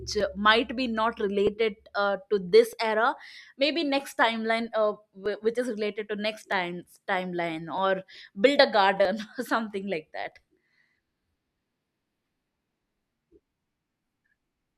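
From 0.20 s to 14.12 s a click recurs every 1.26 s, around ten in all. These are likely clock drift buffer slips: mismatched device clocks force a brief block of samples to be dropped or repeated. Unlike random dropouts, the clicks keep a strict, even rhythm.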